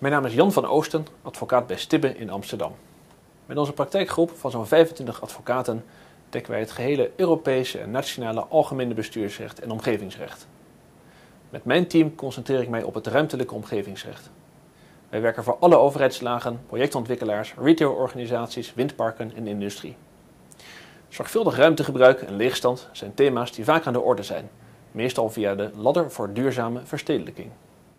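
No technical faults can be heard anywhere in the audio, and the signal stays steady and continuous throughout.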